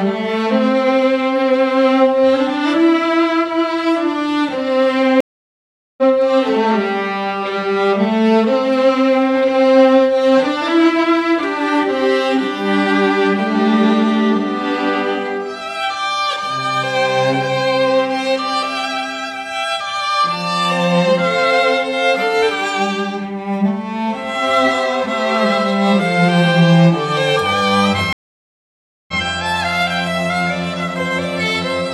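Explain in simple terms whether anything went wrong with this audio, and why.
Stream reconnect, at 5.21–6.03 s and 28.13–29.17 s: the connection dropped, leaving gaps of 0.77 s and 0.95 s. Playback then restarted, first skipping about 0.7 s ahead, then replaying 0.09 s.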